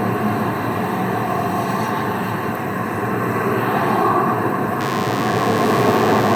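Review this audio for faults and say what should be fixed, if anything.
A DECT cordless phone buzz runs from 4.81 s to the end of the clip. It is a thin, steady buzz, roughly 15 dB below the sound. A nearby DECT handset or base bursts every 10 ms. The audio circuit rectifies those bursts into a 100 Hz tone rich in harmonics. To prevent it, keep DECT phones and bases well away from the recording chain and use shielded, properly grounded cables.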